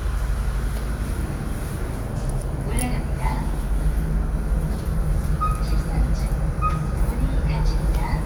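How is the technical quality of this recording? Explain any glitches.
Nothing here stands out as a technical problem, so there are no glitches to explain and the sound comes across undisturbed all the way.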